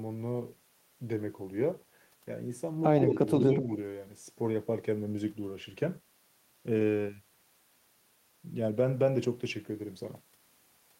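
From 3.0 to 3.16 s there is an echo leak. A faint copy of the speech returns 127 ms late, well below the direct voice. A far-end echo canceller likely let it through.

From 3.49 to 3.71 s the speech is suppressed in double talk. The level dips by a few decibels in short pieces. The canceller likely mistook it for echo.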